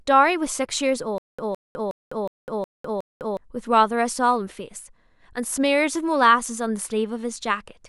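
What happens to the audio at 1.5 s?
At 1.5 s the speech is caught in a stutter with silent gaps, running from 1.18 to 3.37 s. A 161 ms fragment plays six times, each followed by about 204 ms of dead digital silence, giving an even 365 ms cycle. The likely cause is a stalled player or stream replaying its last buffered fragment at each retry. Unlike a simple dropout, the same sound keeps returning, and the speech that belonged in that span never plays.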